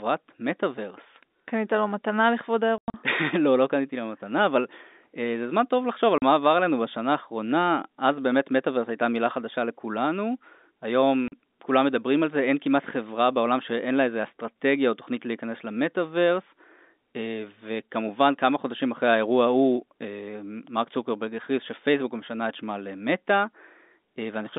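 At 2.78–2.94 s, 6.18–6.22 s and 11.28–11.32 s, packet loss filled with silence cuts holes of 140, 40 and 40 ms, fitting 20 ms packets, seen as flat, near-silent waveform gaps with vertical spectrogram edges.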